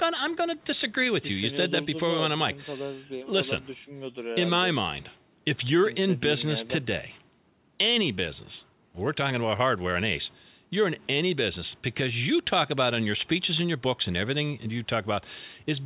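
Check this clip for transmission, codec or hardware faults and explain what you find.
No faults turn up anywhere in this clip.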